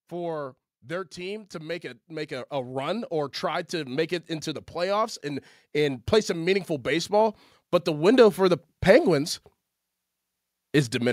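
From 0.09 to 4.18 s, automatic gain rising lifts the level by about 9 dB, then again from 4.73 to 9.33 s by about 7 dB, as the control judges the input too quiet. Speech and background noise swell together, seen as a steadily widening waveform envelope and brightening spectrogram.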